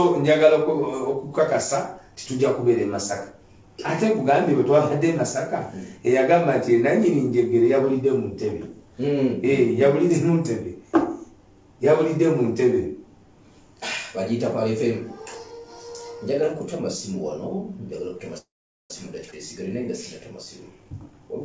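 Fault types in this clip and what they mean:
call audio freeze: at 18.38 s the sound stalls for about half a second, a brief fading continuation then roughly 0.42 s of silence, likely from packets held up so the jitter buffer ran dry; playback resumes where it stopped at 18.91 s, with nothing lost.
skip ahead: at 19.31 s the audio jumps forward, dropping around 150 ms and joining the two sides almost directly with only a tiny 14 ms fill, as a stretch was dropped while later audio was already waiting, cutting the accumulated delay.
jitter buffer speed-up: from 20.70 to 21.29 s the sound runs about 25% fast at unchanged pitch, hurried, because the receiver trimmed short pitch-period pieces again and again, removing roughly 150 ms to bring an overfull buffer back toward its target delay.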